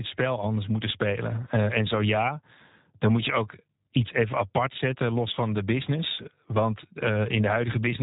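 From start to finish, the speech carries the sound of the G.729 codec. Nothing above about 3.8 kHz survives, so the top end is gone and consonants lose their edge. The coder rebuilds each short frame from a vocal tract filter, a pitch predictor and a few pulses. That thin model leaves the voice plainly rough and synthetic. The damage points to a narrowband VoIP path running at about 8 kbit/s, which fits G.729A.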